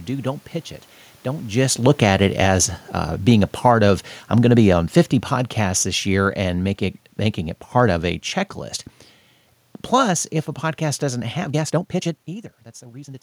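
From 1.58 s to 6.78 s, the automatic gain control judges the input too loud or its background noise too strong and steadily pulls its gain down by about 10 dB. The speech and the room noise behind it sink together, unlike the talker's own shift in distance just before.

From 11.31 s to the end at 13.22 s, the speech runs about 1.56 times faster while its pitch stays put, most likely a time-stretched section where software dropped short pieces to shorten the audio. The pace jumps abruptly and sounds rushed.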